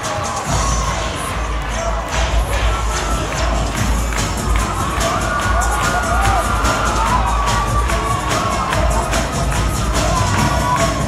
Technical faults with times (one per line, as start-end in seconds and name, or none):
none